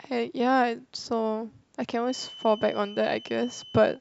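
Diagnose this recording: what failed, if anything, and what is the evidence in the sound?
A feedback whistle sets in at 2.01 s and runs to the end. It is a thin, steady 3 kHz tone, well below the speech level, wavering slightly. The likely cause is an acoustic loop between loudspeaker and microphone, held just at the edge of feedback.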